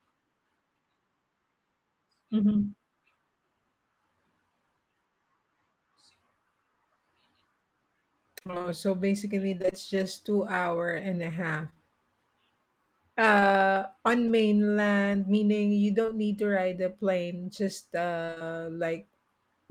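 At 2.53 s a short concealed packet loss leaves a brief smear: about 20 ms of the speech arrived too late, and the receiver bridged it by extending the preceding sound before rejoining the real signal. The same smear recurs at 11.70–11.78 s, just after "hour and a half", at 13.40 s, and at 16.02–16.10 s, just before "need to". The stretches at 11.70–11.78 s and 16.02–16.10 s are each two patches back to back.

From 8.39 to 9.74 s, ending just before "just two hour and", repeated packet loss gives a robotic sound. Holes of about 20 ms keep coming, each filled by continuing the last sound, so the speech turns choppy rather than merely smeared. A denser burst follows at 18.26–18.42 s, where about half the stretch is synthetic fill.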